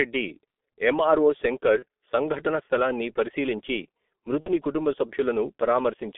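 Throughout, the speech carries G.723.1 codec damage: band-limited to roughly 250 Hz–3.5 kHz, muffled and hoarse, consonants smeared, consistent with a coarse low-rate coder near 6.3 kbit/s. At 1.79–1.83 s and 4.40–4.50 s, VoIP packet loss concealed by the speech codec stretches the last sound into a fading buzzy tone or coloured noise, fitting one and two lost 30 ms frames.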